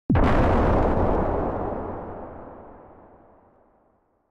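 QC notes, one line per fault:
3.52–3.56 s, chunks out of order: one 20 ms chunk plays a chunk late, after its successor. The swap leaves a brief jumbled blip with three hard joins.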